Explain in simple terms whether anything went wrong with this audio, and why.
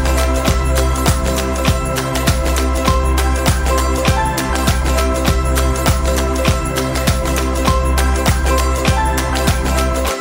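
Nothing went wrong with this audio, so there is no problem to explain.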